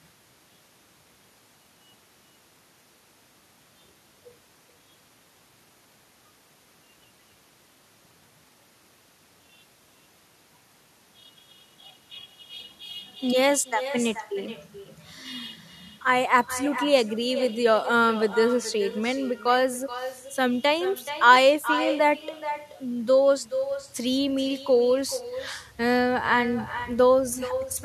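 With no echo canceller on the far end, the returning loudspeaker pickup shadows the speech throughout, a thinner copy about 11 dB down, arriving roughly 0.4 s later.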